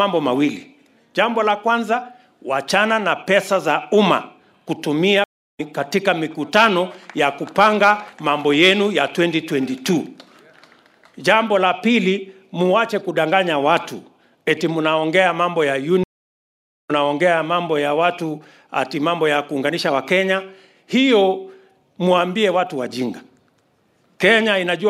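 Two stream reconnects break the audio, at 5.24 to 5.60 s and 16.04 to 16.91 s. Silences of about 0.35 s and 0.86 s follow dropped connections, then playback resumes roughly 0.2 s and a second later.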